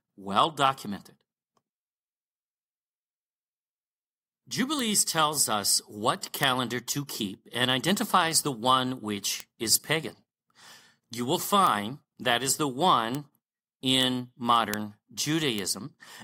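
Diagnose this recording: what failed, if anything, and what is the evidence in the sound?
Eight isolated, sharp ticks cut through the speech at 4.79, 6.43, 9.40, 11.67, 13.15, 14.03, 14.74 and 15.59 s. Each is broadband, unrelated to the speech, and gone instantly, peaking at about -9 dBFS, with the louder ones at 6.43 and 14.74 s reaching about -3 dBFS. This is a bit error spike in digital storage or transfer: a flipped bit throws one or two consecutive sample values off by a power of two, and the next samples are correct again.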